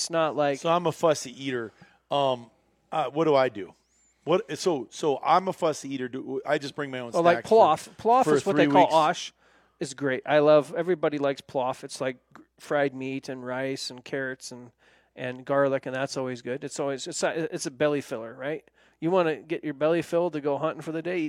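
Speech recording with no audible technical faults.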